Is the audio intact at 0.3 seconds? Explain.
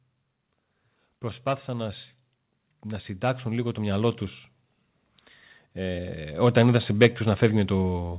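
Yes, the speech is intact at 0.3 s, with no dropout, glitch or distortion at that moment.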